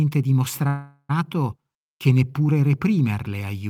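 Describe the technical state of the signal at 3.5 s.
At 3.5 s the signal is intact, with no audible fault at that moment.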